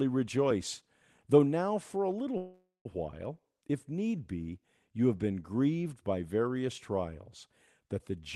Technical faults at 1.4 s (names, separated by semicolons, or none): none